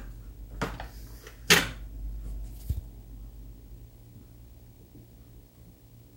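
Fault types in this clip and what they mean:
Video or display buzz: interference from a screen or video cable leaking into the audio path, running under the sounds for the whole clip. It is heard as a rasping buzz at 59.94 Hz, the picture's field rate, with hash above it and a thin whine at 15.7 kHz from the line rate, sitting roughly 25 dB below the wanted sound. A spectrogram shows a steady harmonic comb from 59.94 Hz and a fine horizontal line at 15.7 kHz. The waveform carries a repeating spiky pattern.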